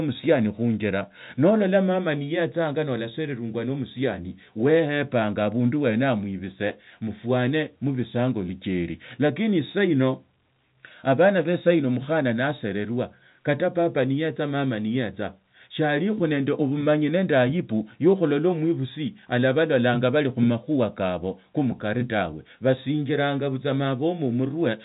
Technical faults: none

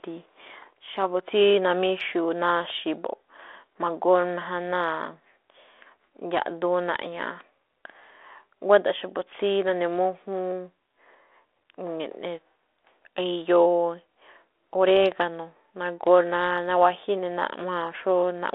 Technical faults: none

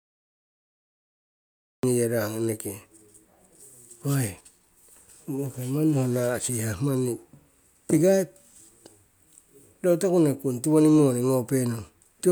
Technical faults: cut-off start

